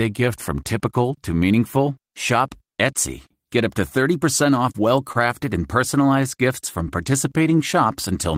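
At 5.12 to 5.17 s there's a short stall from a late packet: the buffer ran dry, so about 25 ms of sound gets held a touch too long. Then from 6.83 to 7.59 s a jitter buffer slow-down repeats pitch periods, adding 63 ms, so the speech drags at 93% speed while keeping its pitch.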